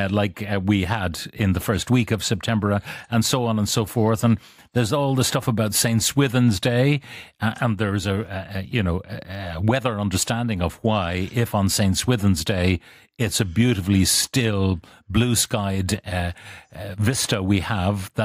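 No technical faults can be heard anywhere in the speech recording. There is nothing here to mark with a time or to trace back to a cause.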